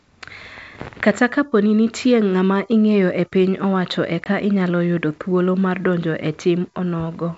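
From 4.24 to 4.28 s, between "ingeyo e piny owacho" and "inyalo yudo thuolo mar", a hard-edged 20 ms silence appears: packet loss on an ADPCM call, where a single dropped packet desynchronises the decoder's predictor and step size.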